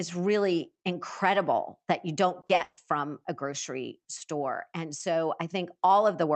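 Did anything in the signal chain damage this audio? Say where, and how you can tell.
Yes, at the network stage. Between 2.41 and 2.79 s, right after "really incredible that you" and before "from a grocery store", there's repeated packet loss with that choppy, robotic sound. You can hear about four holes in quick succession, the longest around 140 ms. Roughly 220 ms of that 380 ms stretch is the jitter buffer stretching the last bit of sound to cover missing packets, so more than half of it is patched-in filler. The call path's codec is working normally, and the top end stops around 8 kHz.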